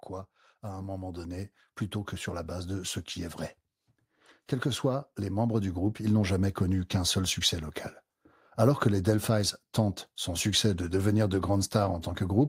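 From 0.62 to 1.58 s the speech and its background swell together by about 5 dB, settling before "plutôt que sur la", then again from 4.14 to 5.99 s by about 6 dB, between "ce qui est vrai" and "ils n'ont jamais connu": automatic gain rising, as the gain control judged the input too quiet and ramped its level up.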